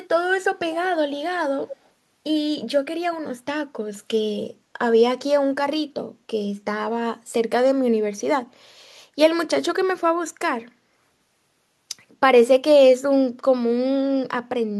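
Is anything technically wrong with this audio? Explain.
Yes. Echo leak at 1.68–1.89 s: the speech repeats 238 ms late, about 15 dB quieter, likely from an incomplete echo canceller. It is a discrete repeat, unlike smeared reverb.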